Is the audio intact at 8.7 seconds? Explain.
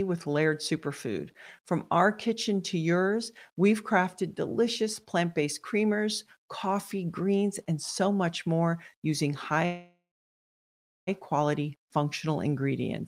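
Yes, at 8.7 seconds the speech plays through cleanly, with no dropout, click, distortion or other fault at that point.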